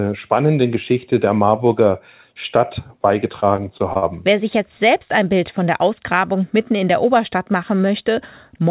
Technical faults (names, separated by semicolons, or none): repeated packet loss (robotic sound)